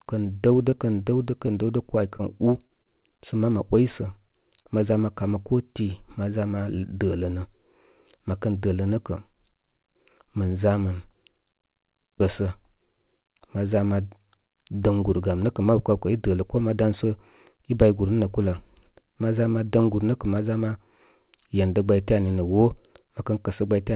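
Between 0.7 and 3.0 s, scattered short gaps: about seven packets, none longer than roughly 20 ms, arrived late or not at all. The receiver bridged each by extending the preceding sound, leaving brief ticks and smears across the speech. At 4.62 to 4.67 s, a short concealed packet loss: 20 ms never reached the decoder, and 28 ms of synthesized continuation blended it over, heard as a quick wobble in the narrowband audio, which carries nothing above 4 kHz.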